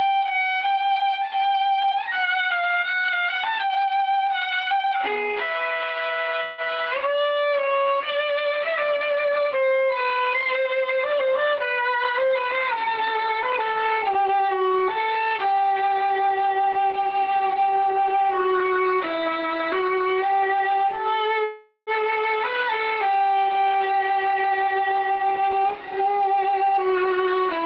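A handful of real-time transport problems show up in this audio, all the kind you'd expect from a call riding over a shaky network. At 6.43 s the sound gets stretched into a fading buzzy tail for about 225 ms until 6.69 s, and when it picks back up roughly 120 ms of material has simply gone. That's most likely a long network dropout: packets never turned up, the receiver papered over the hole by extending the last bit of sound, and the lost chunk was skipped rather than recovered. Right after, from 7.09 to 8.25 s, a jitter buffer slow-down kicks in. Pitch holds steady, but everything drags to about 91% speed as the receiver repeats tiny pitch-period slices to rebuild its reserve, adding 111 ms in total, so sounds feel drawn out. The opposite happens twice as jitter buffer speed-up. From 11.82 to 14.62 s the audio runs at about 105%, shaving off something like 150 ms, and from 23.61 to 27.65 s it's pushed harder to 110%, trimming around 400 ms. 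In both cases the pitch is unchanged, but the pace turns noticeably hurried because the receiver is cutting short repeated pieces to drain a backlog of late packets. Between those two, at 21.44 s there's what sounds like a call audio freeze lasting until 21.90 s. A decaying buzz fills about 429 ms, with 60 ms of it dropping to silence, and then the sound resumes exactly where it left off with nothing lost, which points to delayed packets leaving the buffer empty and inserting a pause rather than a cut.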